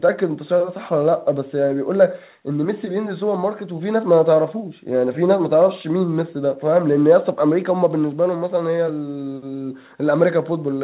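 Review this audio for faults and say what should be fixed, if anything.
Nothing here needs fixing; the speech comes through a normal call chain, with the top of the sound stopping around 4 kHz the way a G.711 A-law call line would have it.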